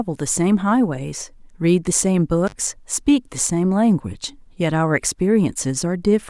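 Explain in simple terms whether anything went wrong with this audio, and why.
At about 2.46 to 2.53 s, the speech cuts out briefly. This is an intermittent contact fault. A loose cable or plug lost its connection for roughly 53 ms. You hear a crackle as it breaks and reconnects, with faint hiss between.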